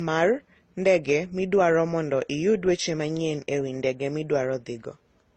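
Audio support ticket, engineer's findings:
Speech band stops at 12.8 kHz for the whole clip. Layered smearing and swirly artefacts from several codecs. Likely transcoding between lossy codecs, suggesting AAC-LC, then Opus, then HE-AAC, each near 32 kbit/s. Each pass re-encodes earlier damage.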